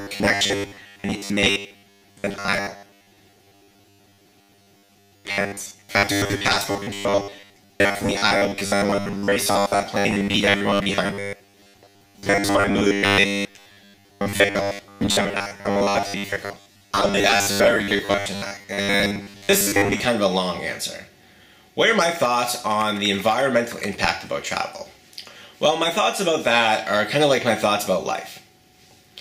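From the very start, about 0.01 s, right through to 20.07 s, you get robotic sound from repeated short buffers: a stiff, metallic buzz pinned at 100 Hz that loosely tracks the sound underneath. The likely cause is audio arriving too slowly, with the software papering over the gaps by looping the last slice, which fits a 10 ms buffer. Well over half the material seems to be repeats rather than fresh audio.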